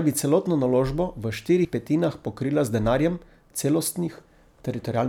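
At 1.65 s there's a brief blip from damaged data in the compressed stream: corrupted bytes throw the decoder off sync until it finds the next frame.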